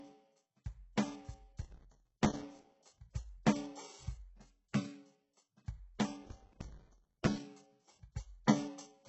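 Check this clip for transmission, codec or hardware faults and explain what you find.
Two faults are audible in this music clip: heavy codec damage throughout, and two bursts of crackle.

HE-AAC compression is the likely cause of the damage throughout. Nothing sounds above 8 kHz. The upper band is rebuilt from copied lower bands, so its harmonics don't match. The heavy damage fits a very low bitrate, near 8 kbps.

Processor overload crackle occurs from 1.62 to 2.76 s and from 6.25 to 7.31 s. Small buffers, about 5 ms each, miss their deadlines over and over. Each miss leaves a brief silent gap with hard edges. Together they make a gritty tearing burst.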